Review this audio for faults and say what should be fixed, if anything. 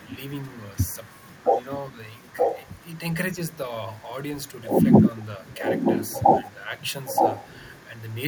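The far end's echo canceller likely let part of its loudspeaker pickup through, so this is an echo leak. A delayed copy of the speech returns about 0.92 s late at 0.0–0.17, 0.76–1.44, 2.36–2.8, 5.5–6.14, 7.05–7.5 and 7.77–7.85 s. It is faint in the first, second and last stretches and only slightly below the direct speech in the other three, where the repeat is clearly audible. Better acoustic coupling control and a longer echo-path model in the canceller would prevent this.

Speech suppressed in double talk likely comes from the echo canceller misjudging simultaneous talk as echo and attenuating it. The speech level dips by around 5 dB in two short bursts, at 1.91–1.97 s and 3.34–3.38 s, each lasting only tens of milliseconds, so the sound briefly pulls back. A more reliable double-talk detector that holds suppression off while the near talker is active would prevent this.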